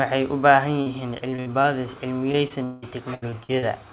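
A speech clip, band-limited to nothing above 4 kHz, consistent with a G.711 mu-law call path at 64 kbps. It has two stretches of repeated packet loss (robotic sound). Just after "u baahan", from 0.82 to 1.66 s, six short holes (longest 59 ms) are patched by stretching the preceding sound. From 2.32 to 3.64 s, seven gaps (longest 185 ms) fill about 31% of the span. Unlike a single dropout, the concealment recurs in quick succession, giving choppy sound with pieces missing rather than one clean silence.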